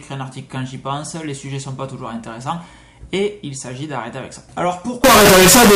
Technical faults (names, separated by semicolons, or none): float read as integer